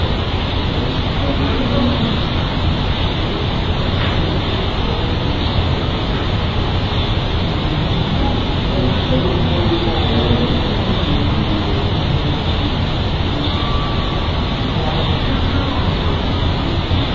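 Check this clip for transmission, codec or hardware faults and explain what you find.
One fault runs through the whole clip: a wrong sample rate. The audio is being played back at half the rate it was captured at, with no conversion, which fits material recorded at 32 kHz played at 16 kHz. Everything therefore runs at half speed and sits a full octave (12 semitones) low, sounding slow, dragged and deep.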